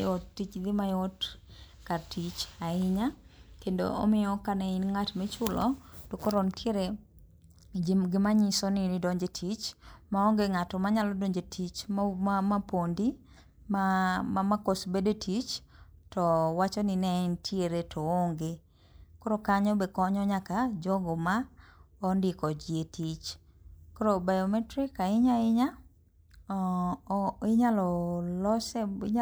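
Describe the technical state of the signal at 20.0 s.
At 20.0 s the speech signal is intact, with no audible fault at that point.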